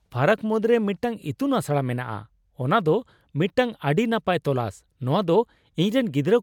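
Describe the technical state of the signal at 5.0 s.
Around 5.0 s the speech signal is intact, with no dropout, distortion, clicks or other fault to be heard at that point.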